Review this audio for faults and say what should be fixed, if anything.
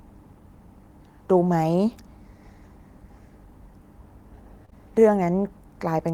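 Short concealed packet loss occurs twice back to back, at 4.65–4.70 s and 4.70–4.73 s. In each, about 20 ms of audio arrived too late to decode. The receiver extended the preceding sound to bridge each gap, leaving a brief smear before normal audio resumes. A larger jitter buffer or forward error correction on the link would prevent it.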